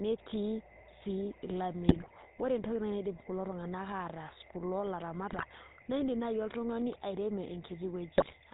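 From the start to the end, the speech carries the coarse, buzzy roughness of the GSM full-rate codec, plainly audible and consistent with a 13 kbit/s stream. The codec models the vocal tract as a filter and excites it with a thinned, regularly spaced pulse train, so fine detail in the excitation is lost. Nothing survives above 4 kHz, which leaves the sound dull at the top and gravelly underneath.

GSM bit errors strike three times: 1.88 to 2.12 s, 5.32 to 5.47 s, and 8.18 to 8.35 s. In each burst, corrupted filter, pitch and gain parameters reach the decoder, so individual frames are rebuilt with a bent spectrum or a wrong level. The speech breaks into brief squawks, pops and gargling. The last burst carries the heaviest corruption of the three, a bit error rate of about 7.3%.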